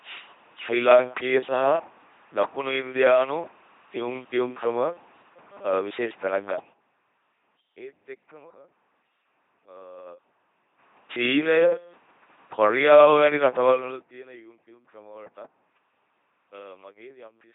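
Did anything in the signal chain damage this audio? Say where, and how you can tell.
Yes. The damage starts at the codec stage: the speech has been through an LPC-10 vocoder at 2.4 kbit/s, and the damage is heavy throughout. The vocoder discards the original waveform and rebuilds each moment from a small all-pole vocal-tract filter driven by either a pulse train or noise, never a mix. That gives the buzzing, mechanical robot voice, with buzz or hiss wherever the voiced/unvoiced call goes wrong. Nothing is present above 3.8 kHz, which fits this narrowband vocoder.

A second fault sits in the gain stage: zipper noise from level changes applied in 3 dB jumps with no smoothing between them. Each jump puts a small click into the waveform, heard as ticking riding on the sound while the level moves. It happens three times. From 6.44 to 6.88 s the level drops by about 20 dB at roughly fifteen steps a second. 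From 10.0 to 11.0 s it rises by about 20 dB at roughly seven steps a second. From 13.68 to 14.08 s it drops by about 20 dB again at the faster rate.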